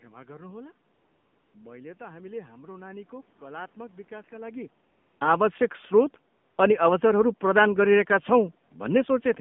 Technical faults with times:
0.00-9.41 AMR narrowband mobile codec
0.94-1.54 AMR comfort noise
4.90-5.20 AMR comfort noise
6.36-6.58 AMR comfort noise

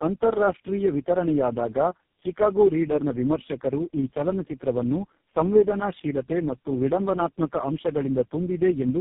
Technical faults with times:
0.00-9.00 tandem speech coding

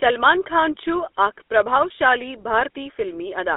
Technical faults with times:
0.00-3.57 GSM full-rate codec

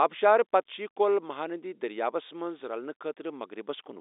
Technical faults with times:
none

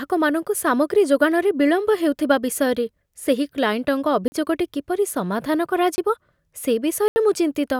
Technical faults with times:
4.28-4.32 block of digital silence
5.96-5.98 block of digital silence
7.08-7.16 block of digital silence

